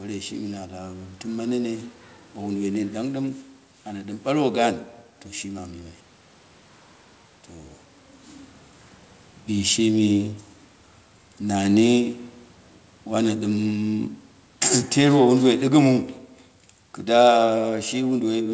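From 11.42 s to the end of the speech, the level sinks steadily: the voice and the room noise behind it drop together, so the whole recording seems to recede rather than the talker turning away. This is automatic gain falling. The gain control judged the input too loud, or its background noise too strong, and pulled its gain down gradually. Unlike the level change around 7.5 s, where the talker moved, here the background falls too.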